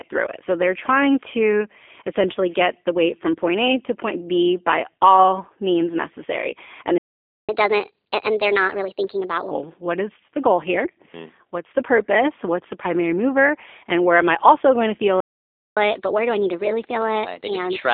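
G.729 codec damage runs through the whole clip. This 8 kbit/s VoIP codec rebuilds speech from a vocal tract model, a pitch predictor and a few pulses per frame, so the voice is plainly rough and synthetic, confined to roughly 250 Hz to 3.5 kHz.

A playback stall cuts the speech off from 6.98 to 7.49 s, about 0.51 s of silence. A second one, from 15.20 to 15.77 s, just after "also going to feel", lasts about 0.56 s. The likely cause is the player running out of buffered data or its thread being blocked, leaving the output silent until it recovered.

Catch-up at higher speed follows each stall as the player resamples its backlog to regain lost time. From 7.49 to 9.51 s, around "what is the goal", speech runs 1.25 times fast and about four semitones high. From 15.77 s to the end it runs 1.15 times fast, about two semitones high.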